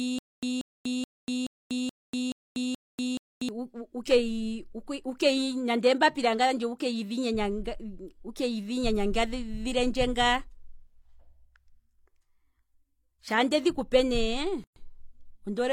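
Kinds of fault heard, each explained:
Stutter with silent gaps: from the start, a 185 ms fragment repeats seven times with 242 ms of silence between, likely a stalled stream replaying its last bit.
Gap at a join of encoded pieces: at 14.64 s the sound cuts out for 123 ms, leftover encoder padding between separately encoded chunks, then carries on.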